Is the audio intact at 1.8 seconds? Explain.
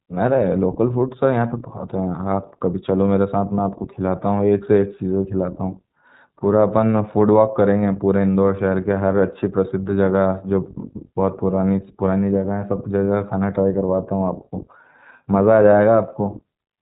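No. At 1.8 seconds the speech carries iLBC codec damage, present across the whole clip. Each 20 ms frame's excitation is coded independently, giving a plainly rough, synthetic texture, and the band stops at 3.8 kHz, so the speech sounds narrow and telephone-like.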